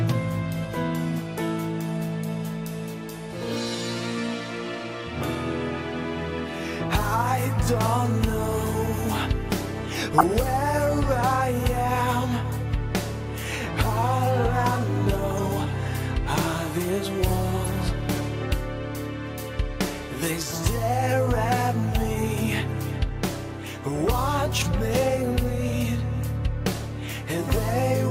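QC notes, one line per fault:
10.18–10.28 s, 15.31–15.44 s, 17.63–17.66 s: DAB burbling. Brief bursts of bit errors corrupt MP2 audio samples, giving short blips of noise in single sub-bands. On a spectrogram, isolated frequency blocks flare for a few frames.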